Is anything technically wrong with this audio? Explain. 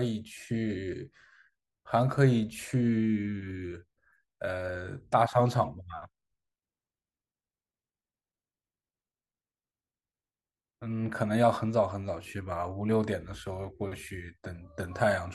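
No, the speech signal shows no technical faults that a listener can hear.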